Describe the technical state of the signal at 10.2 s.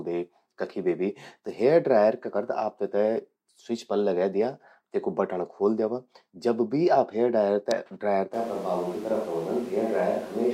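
At 10.2 s we're in the middle of a switch to a distant microphone, which starts abruptly at 8.34 s and runs to the end of the clip. The speech suddenly turns roomy and hollow, with thinner bass and a noise floor sitting only about 25 dB under the voice. Loudness barely changes. The likely cause is the close mic dropping out and the track falling back to a farther pickup, like a camera mic.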